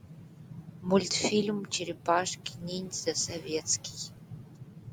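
A short speech recording carries noise suppressor artifacts for its whole duration: the processor pulls down every band it judges to be steady background, frame by frame, so the room noise, sitting about 19 dB below the speech, dips in the pauses and swells back under the talking. Alongside this is speech cut by the noise suppressor, running from 0.0 s to 4.93 s and touching roughly four seconds of material. Here the suppressor misreads quieter parts of the speech itself as noise and attenuates them with the background, by as much as about 19 dB at the deepest point. Soft consonants and trailing word endings come out swallowed or faint rather than cleanly articulated.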